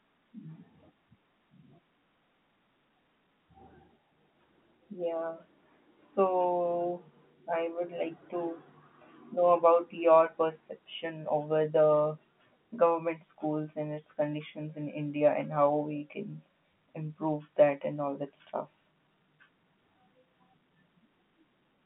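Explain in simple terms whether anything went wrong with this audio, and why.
Nothing went wrong: the speech has the narrow, slightly muffled sound of ordinary G.711 telephone coding, with the line passing roughly 150 Hz to 3.4 kHz and nothing above about 3.8 kHz, which is how a standard landline call is built rather than a fault.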